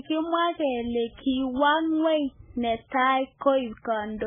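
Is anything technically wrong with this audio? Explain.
Yes. Throughout the speech, MP3 compression is likely at fault, and the damage fits a very low bitrate of around 8 kbps. Short of bits, the encoder cuts everything above 3.5 kHz and switches weak frequency lines on and off between frames, so the sound is dull, heavily watery and swirling, with smeared attacks.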